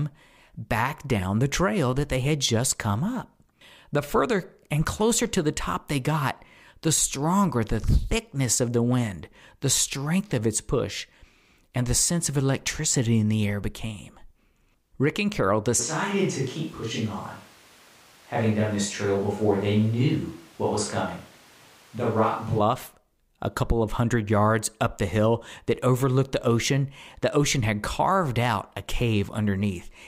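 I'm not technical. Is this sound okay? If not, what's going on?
No. From 15.81 to 22.58 seconds the speech suddenly turns roomy and hollow, as if the speaker stepped into a bigger space. It sounds thinner, with less low end, and some room background becomes noticeable. The loudness stays about the same. At 22.58 seconds the closer sound snaps back just as abruptly. This is a switch to a distant microphone. The likely cause is that the close microphone dropped out, and a mic further away was used instead.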